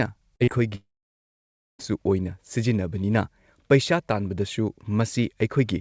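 From 0.36 to 0.43 s and again from 0.44 to 0.50 s, short concealed packet loss occurs. Each time about 40 ms of audio went missing, and the receiver extended the preceding sound to cover it before blending back. The result is two closely spaced brief smears in the speech.

From 0.75 to 1.82 s the audio breaks off. The last sound carries on briefly as a fading synthetic continuation, then about 0.94 s of silence follows, and speech resumes with the gap simply skipped. This pattern is likely a long network dropout. The band-limited call audio, with nothing above 8 kHz, carries through on both sides of the gap.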